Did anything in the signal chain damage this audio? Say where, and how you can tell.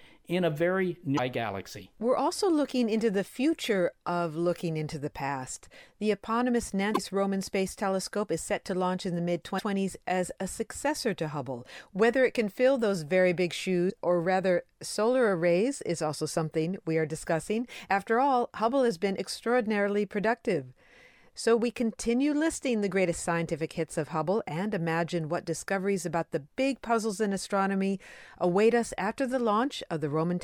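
Yes. There is damaged data in a compressed stream at the codec/storage stage. Brief disruptions occur at 1.16–1.19 s after "in a very", at 6.91–6.98 s, at 9.55–9.62 s between "launch in the mid" and "as a successor to", and at 13.86–13.92 s between "fill those very big" and "or rather solar arrays". Corrupted bytes made the decoder misread frames and resynchronise. A spectrogram shows short broadband vertical smears, and the waveform shows abrupt discontinuities.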